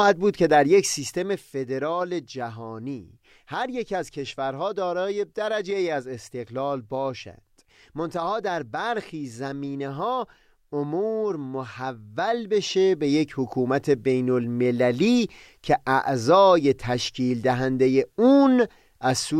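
A gain control stepping in coarse increments without smoothing causes zipper noise from 0.72 to 1.52 s, as the level drops by roughly 10 dB, and again from 11.92 to 13.32 s as it rises back. Around thirty small steps a second each click, giving a rapid ticking over the speech.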